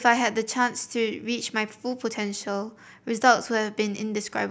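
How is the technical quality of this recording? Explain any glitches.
The speech has one audible glitch, a dropped buffer (overrun) at 3.98 s. Roughly 7 ms of sound is missing, and the audio on either side is joined directly with no gap, so you hear a slight jump forward. The likely cause is the program failing to collect a buffer before the hardware overwrote it. On a waveform it shows as an abrupt discontinuity where the signal snaps to a new value. On a spectrogram it appears as a thin vertical broadband line.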